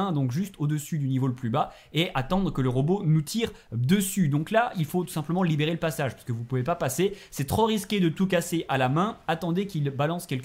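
No technical faults are audible.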